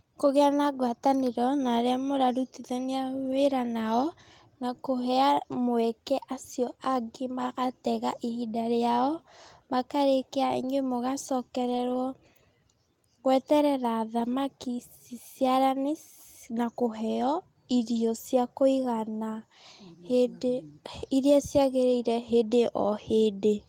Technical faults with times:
3.23-3.37 lost packet rebuilt from error correction
7.41-7.43 lost packet rebuilt from error correction
10.59-10.69 lost packet rebuilt from error correction
11.61-11.95 lost packet rebuilt from error correction
14.19-14.33 lost packet rebuilt from error correction

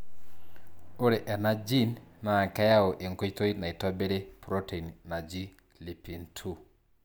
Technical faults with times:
none

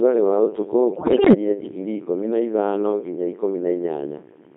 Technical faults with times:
0.00-4.56 Codec 2 vocoder
0.92-1.33 bit errors on digital voice radio

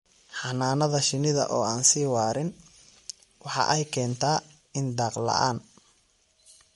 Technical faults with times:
0.00-6.75 MP3 compression

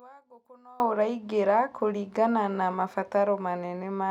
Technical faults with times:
0.00-0.80 one channel inverted

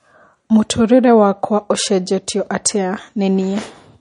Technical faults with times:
0.00-4.01 MP3 compression

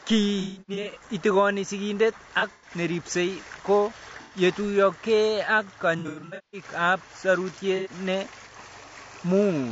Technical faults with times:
0.00-9.72 low-delay AAC compression
0.41-1.03 AAC frame loss with concealment
2.39-2.71 AAC frame loss with concealment
4.22-4.37 AAC frame loss with concealment
5.99-6.64 AAC frame loss with concealment
7.76-7.91 AAC frame loss with concealment

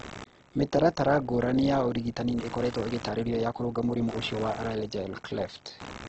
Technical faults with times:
0.00-6.09 computer activity noise
0.00-6.09 Opus compression
2.03-4.93 time-stretched section

